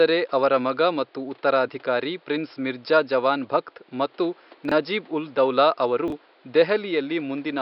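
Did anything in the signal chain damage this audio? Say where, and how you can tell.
Yes. Chunks out of order at 4.65 to 4.72 s and 6.08 to 6.12 s, in the driver or buffer stage. Blocks of about 21 ms, which fits a 1024-sample buffer at 48 kHz, play two and then one slot late, so the speech jumbles briefly at each hard join.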